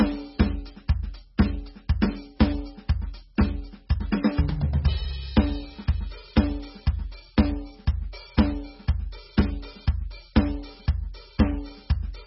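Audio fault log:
throughout MP3 compression: the music stops dead at 5.6 kHz and swirls watery as weak frequency lines flicker between frames, likely an MP3 encoder starved near 16 kbps; a plain low-pass filter would dull the treble without this churning.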